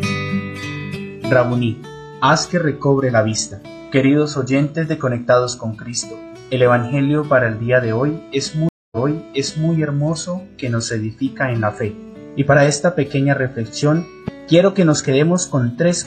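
At 8.69 s a stream reconnect breaks the audio. The sound drops out for 231 ms, and when it resumes it has jumped back about 0.79 s, repeating material just heard. On the waveform this shows as a flat gap, then a soft onset through 9.71 s.

From 14.28 to 14.30 s a single loud pop sits on top of the continuing sound, peaking a few decibels above it, likely a voltage glitch from a switch or static. It appears as one sharp spike, a thin full-band vertical line on a spectrogram.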